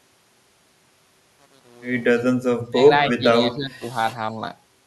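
The speech drops out by about 20 to 25 dB at 2.69–2.8 s, 3.1–3.24 s and 3.4–3.84 s. That's likely speech suppressed in double talk, with the echo canceller ducking the near talker.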